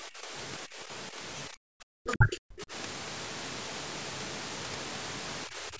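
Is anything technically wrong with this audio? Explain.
Yes. The recording is speech from a call, and the echo canceller acted on the microphone signal in three ways.

Background gated by the echo canceller occurs at 0.0–0.31 s, 0.66–0.79 s, 1.5–1.86 s, 2.58–2.68 s and 5.47 s to the end. Each time the far-end loudspeaker was active, the canceller pulled the microphone down hard. The room sound dips by about 10 to 17 dB, and by about 33 dB at 1.5 s, then comes back once the canceller releases.

At 2.07–2.13 s a faint second voice can be heard, roughly 35 dB below the talker. This is likely the other side's voice leaking through: the canceller did not fully remove the loudspeaker signal picked up by the microphone, so a short scrap of it passes.

Right after, at 2.14–2.3 s, the talker's own speech collapses by roughly 35 dB for a brief moment. The likely cause is speech suppressed in double talk. 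With both ends active, the canceller could not separate near speech from echo and attenuated everything.

The call microphone processing, with nothing above 8 kHz, is standard and not a fault.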